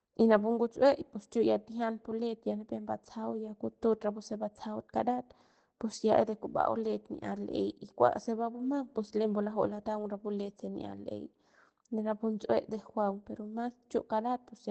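Right from the start and all the way through, the speech carries Opus voice compression, running in its SILK linear-prediction mode at wideband. Nothing comes through above about 8.6 kHz, so the top end sounds capped and a bit muffled. The excitation is coded coarsely enough that the damage is plainly audible, giving a slightly hoarse, synthetic edge. That all fits a low bitrate, somewhere around 12 kbps.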